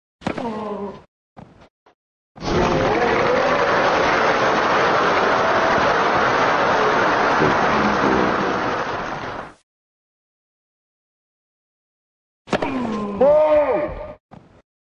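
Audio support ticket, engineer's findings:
Wrong sample rate, whole clip. Everything runs slow and low: speed at 0.667x, pitch down about 7 semitones, both shifting together. Probable component: playback or output stage, no resampling step. The ratio fits 48 kHz material being clocked out at 32 kHz. Samples themselves look intact, just played too slowly. Worth checking what rate the device is opened at versus the file header.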